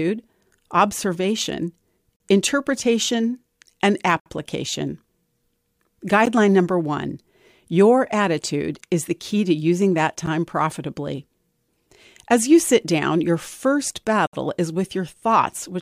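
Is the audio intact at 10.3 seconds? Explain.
No. A gap between stream segments at 10.26 s: segment timestamps leave a 10 ms hole the player fills with silence, a hard-edged dropout with no audio lost.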